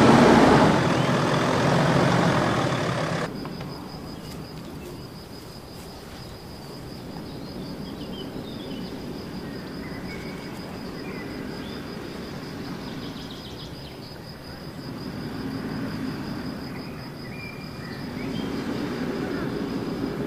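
Dropped samples at 13.2 s: a fraction of a millisecond of the stream is likely missing, so the waveform jumps and leaves one sharp click.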